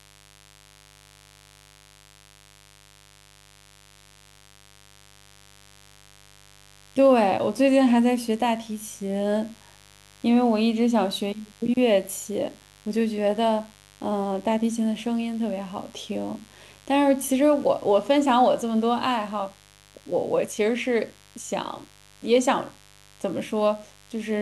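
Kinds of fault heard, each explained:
Mains buzz: Sharp switching spikes from the 50 Hz supply, entering through something like a dimmer, rectifier or unshielded lead, repeat twice per cycle and spread harmonics up into the kilohertz range, giving a steady, raspy buzz around 30 dB below the speech throughout.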